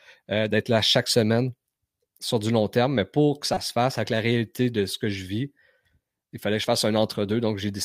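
Corrupt frames decoded: a glitch around -25 dBFS at 0.65 s between "euh d'être" and "là chaque semaine", then a louder one near -15 dBFS from 3.54 to 3.57 s after "terme mais pour que". Flipped bits misplaced energy in frequency.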